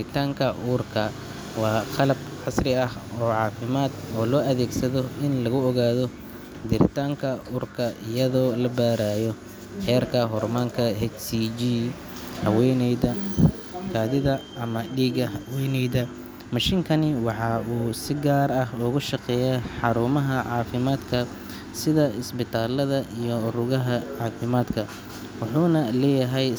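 No technical faults can be heard anywhere in the recording, and the signal stays steady and continuous throughout.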